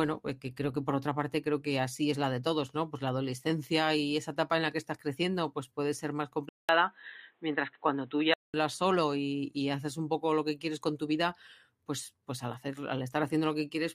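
At 6.49 s, after "pues puede ser más", the speech drops out for 200 ms, then returns band-limited with nothing above 4 kHz and a faint new noise floor. This is likely an input switched to a poorer device, and full bandwidth returns at 8.54 s before "solo y haces un".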